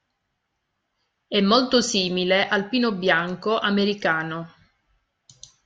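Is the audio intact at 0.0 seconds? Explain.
Yes, the speech at 0.0 seconds is intact, with no audible technical fault at that moment.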